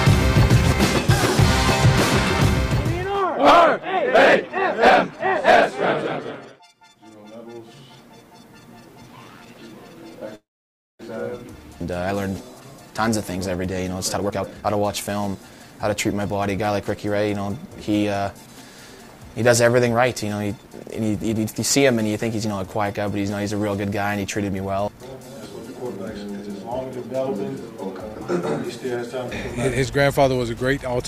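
At about 10.35 s the audio locks up in a call audio freeze until 11.01 s: the last bit of sound gets stretched into a short fading tail, then roughly 0.57 s of silence, and playback picks up right where it left off with nothing lost. That's likely packets stuck in transit draining the jitter buffer, which leaves the stream about 0.64 s later than before. A few seconds on, from 14.14 s to 15.92 s, there's a jitter buffer speed-up. The sound runs at about 136% of normal speed with the pitch unchanged, so it comes across as rushed. The receiver is snipping out many tiny pitch-period-sized slices to shed the extra buffered delay, taking out somewhere around 0.7 s in total.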